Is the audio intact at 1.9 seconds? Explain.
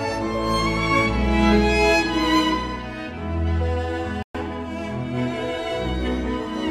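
Yes, the audio at 1.9 seconds is intact, with no dropout, click, distortion or other fault at that point.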